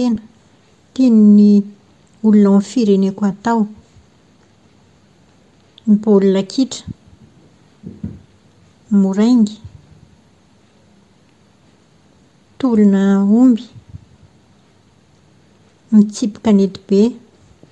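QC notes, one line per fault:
Throughout: Bluetooth LC3 compression. The speech carries a plainly audible breathy, grainy edge, with the upper spectrum sounding thinned out and replaced by a hiss-like texture instead of clean detail. The likely cause is the LE Audio transform codec discarding much of the high band and filling it with noise. The character points to a moderate rate of around 48 kbps and 10 ms frames, which is not enough to hide the upper-band rebuild.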